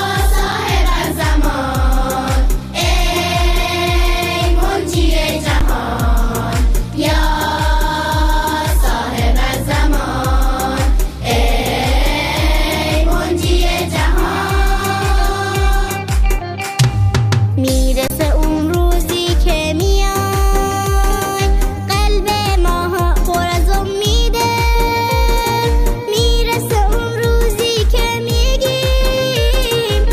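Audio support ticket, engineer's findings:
Underrun with held sample: output buffer ran dry at 0.52 s, 5.60 s and 18.08–18.10 s (about 6, 12 and 23 ms, fitting 256-, 512- and 1024-sample buffers); converter froze on last value. Sound flatlines briefly, roughly matching audio dropped.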